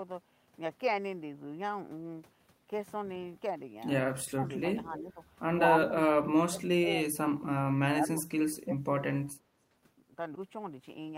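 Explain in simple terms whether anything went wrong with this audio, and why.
Speech suppressed in double talk, at 4.19–4.47, 4.89–5.2, 5.72–5.93, 6.12–6.91, 7.89–8.19 and 8.36–8.87 s: the voice keeps dipping or cutting out in pieces, most deeply around 6.1–6.9 s. Likely both sides spoke together, and the echo canceller muted this talker along with the echo.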